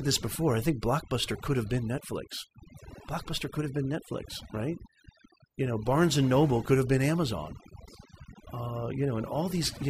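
From start to finish the speech shows overdone noise removal: an over-aggressive reducer mutes narrow frequency bands near its noise estimate, taking quiet speech detail with them. Pauses drop to near silence with twinkling specks, unlike a gate's whole-signal open-close pumping.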